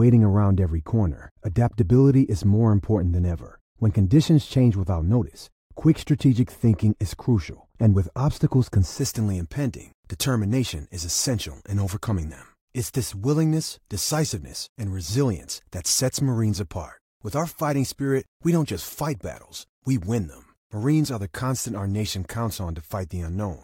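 From the start to about 8.99 s, the speech carries wrongly applied de-emphasis: a treble cut meant to reverse pre-emphasis that was either never there or had already been undone. Response falls smoothly above the midrange, down about 11 dB at 10 kHz relative to 1 kHz, leaving the sound dull and muffled.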